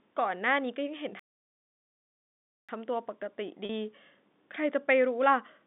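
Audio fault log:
1.19–2.69 s, playback stall: likely the player ran dry or its thread blocked, so the speech cuts out for about 1.5 s, then resumes.
3.65–3.69 s, packet loss with pitch repetition: about 40 ms of data went missing and the receiver looped the last pitch period, leaving a brief held, buzzy tone.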